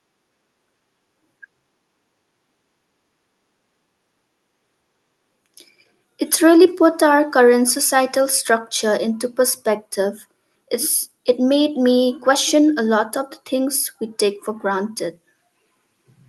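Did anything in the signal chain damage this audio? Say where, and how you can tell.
No, nothing in the signal chain damaged this speech.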